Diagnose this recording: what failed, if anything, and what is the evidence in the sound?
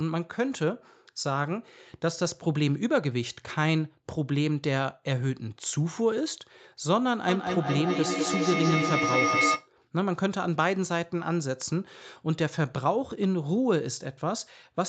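Feedback echo between two devices at the call-processing stage, 7.28 to 9.74 s: the speech recirculates roughly every 200 ms, building to about 1 dB above the direct speech instead of decaying.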